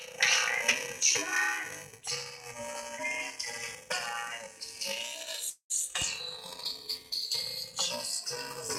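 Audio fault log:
5.49 to 5.72 s, call audio freeze: the sound stalls for about 0.2 s, the last fragment stretched into a fading buzz that drops to silence for the final 100 ms, then resumes exactly where it stopped, so nothing is lost but everything after arrives about 204 ms later. The likely cause is delayed packets emptying the jitter buffer. On a spectrogram a smeared, decaying band gives way to a blank strip. The waveform shows shrinking envelope, then flat line.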